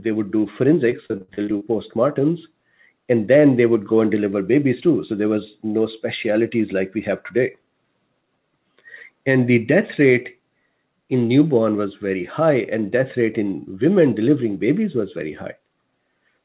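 From 0.9 to 1.63 s the sound turns choppy and robotic, the mark of repeated packet loss. Eight short holes open in quick succession, the longest about 60 ms, and each is patched by stretching the previous fragment, so roughly a third of that stretch is concealment. On a waveform the envelope repeats in stuttering blocks, and a spectrogram shows smeared, frozen columns. Above 4 kHz it is empty throughout, which fits a 64 kbps G.711 call path.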